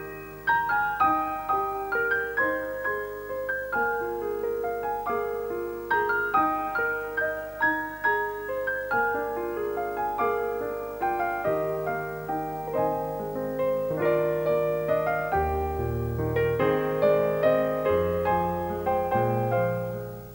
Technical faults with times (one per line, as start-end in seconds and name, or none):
0.00-20.34 video or display buzz